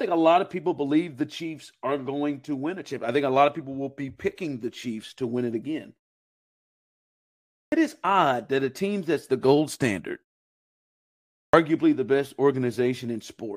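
The output device powers down during silence and needs time to wake, producing a clipped start after a pause twice: at 7.66 s, after 1.75 s of quiet, about 61 ms vanishes before "is odd that a", and at 11.47 s, after 1.31 s, about 64 ms goes before "the best", so both lines begin abruptly.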